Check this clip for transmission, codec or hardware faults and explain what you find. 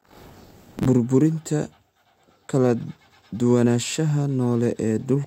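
One hardware fault is present: buffer tearing from 0.0 to 0.87 s. The writing program and the playback hardware have drifted out of step, so they cross inside each buffer period. Roughly two fifths of every buffer replays speech from one lap earlier, around 40 ms old, with abrupt joins at both edges. This gives a steady robotic buzz at 46.9 Hz, which fits a 1024-sample buffer, and the buzz is heard only while speech is present.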